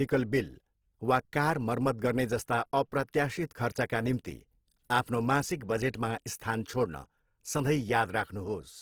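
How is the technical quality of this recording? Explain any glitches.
Opus compression runs throughout the speech, most likely a low-bitrate CELT encode near 16 kbps. Bands filled by folding or noise make it plainly grainy and rough, with content extending to about 20.2 kHz.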